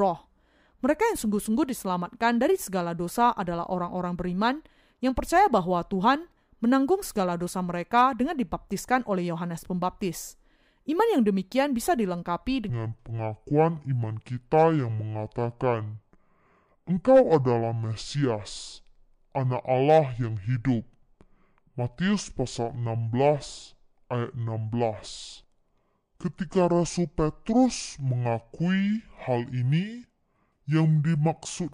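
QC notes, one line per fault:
12.69–31.74 s: section at the wrong speed. The speech slows to 0.641 times its recorded rate and drops roughly seven semitones, turning deep and sluggish, likely from playback against a mismatched clock. On the spectrogram, harmonics and formants step lower and stretch in time. On the waveform, the cycles visibly widen.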